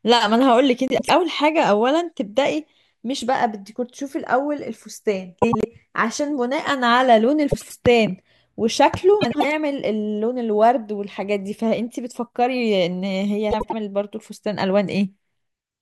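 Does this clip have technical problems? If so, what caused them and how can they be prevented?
Yes: frames out of order at 0.88–1.10, 5.42–5.65, 7.51–7.75, 9.21–9.45 and 13.51–13.73 s. In each, two neighbouring runs of about 96 ms, which fits four frames each, play with their order swapped. This gives a garbled flutter in the speech. Unlike a dropout or a repeat, nothing is missing or doubled, and no time is lost. Using packet sequence numbers and a reorder buffer before decoding would prevent it.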